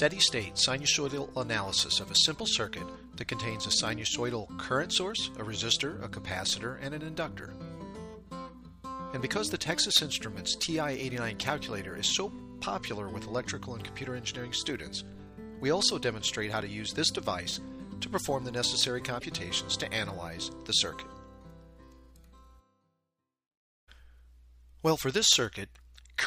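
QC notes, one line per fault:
19.19–19.23 s, broken MP3 bit reservoir: a disturbance of about 44 ms breaks the flow, and the audio resumes further along than it should. The likely cause is lost MP3 frames. Each frame relies on bits stored in the frames before it. With some missing, the decoder reads the wrong bytes for the first frames after the gap and produces damage instead of sound. The span is under two frames of 26.1 ms.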